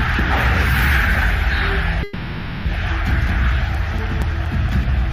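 A call audio freeze runs from 2.03 to 2.67 s. The sound stalls into a fading buzz-like continuation of its last moment, filling about 620 ms with no silence, then resumes where it stopped. This is likely a jitter buffer running empty while packets were delayed.

CD scratch ticks appear from 3.27 s to the end: nine short ticks at roughly five per second, each only a few milliseconds long. A blemish on the disc defeated error correction once per revolution, and the player patched the damaged samples each time.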